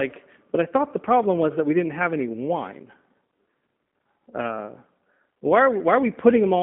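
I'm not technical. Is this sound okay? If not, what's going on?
No. The whole clip went through the G.729 codec, a phone-call speech squeezer. Speech sounds slightly rough and synthetic, with nothing above about 3.7 kHz.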